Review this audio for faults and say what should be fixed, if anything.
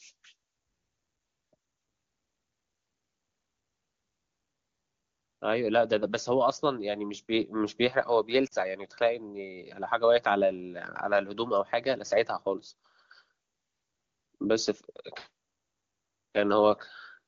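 At 8.47 to 8.54 s there's a short burst of lost AMR speech frames, about 40 ms, which fits two 20 ms frames failing their checksum. The decoder repeats the last good pitch and vocal tract settings while turning the gain down, so you get a quick drop to near silence, faded faster than narrowband would because this is an AMR-WB stream. To prevent it, improve the radio link or add stronger error protection so frames arrive intact.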